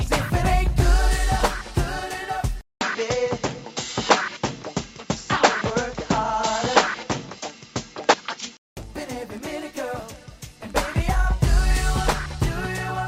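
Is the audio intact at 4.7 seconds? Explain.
No. At 4.7 seconds the audio sits inside a span from 2.61 to 8.77 s where it sounds like the input switched to a poorer device, likely a change of microphone or a headset call profile partway through. Nothing above 7.6 kHz gets through, so the sound turns duller and boxier, with a faint new noise floor well below the signal and roughly unchanged level. A 0.2 s silence marks the switch.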